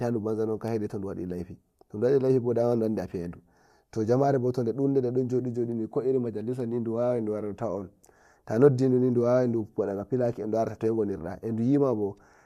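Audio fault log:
No technical faults can be heard anywhere in the speech recording.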